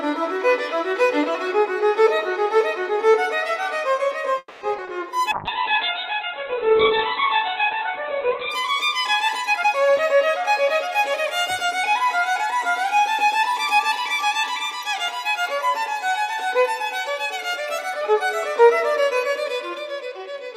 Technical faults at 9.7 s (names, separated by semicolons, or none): jitter buffer speed-up